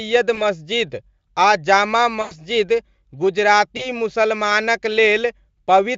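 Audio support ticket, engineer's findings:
VoIP packet loss concealed by the speech codec at 0.35–0.43 s, 2.21–2.36 s and 3.77–3.88 s. The Speex decoder stretches the last pitch and filter into a buzzy tone or coloured noise that fades. Unlike a dropout to silence, there is no hard gap, and the sound stays weak after recovery. The longest event fits about five lost 20 ms frames.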